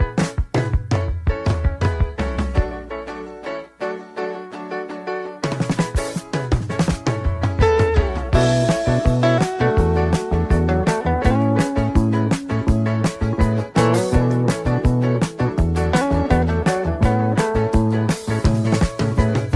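Nothing in the audio stood out as a technical fault on listening.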